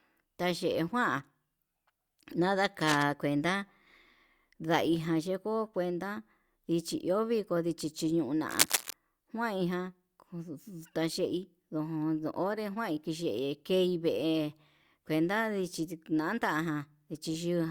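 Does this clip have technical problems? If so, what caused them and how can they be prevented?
Yes. Two bursts of cable scratch noise cut across the speech, from 2.81 to 3.03 s and from 8.49 to 8.93 s. The first sits a little below the speech level. The second is about as loud as the speech. Both sound like dense, ragged scratching. The likely cause is a worn cable, connector or control being moved, so its contact resistance jumps around and adds noise. Replace worn leads, clean connectors, and keep cables still while recording.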